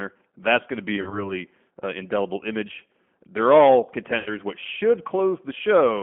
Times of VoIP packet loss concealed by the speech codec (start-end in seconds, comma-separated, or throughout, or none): 0.96-1.33, 4.18-4.37